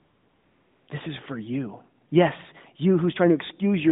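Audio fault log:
0.00–0.88 s and 2.10–2.12 s, AMR comfort noise: no speech frames were sent for 875 ms, then one 20 ms frame, so the receiver filled each pause with smooth, steady synthetic noise. Unlike a dropout or gate, the gap is noise-filled rather than dead.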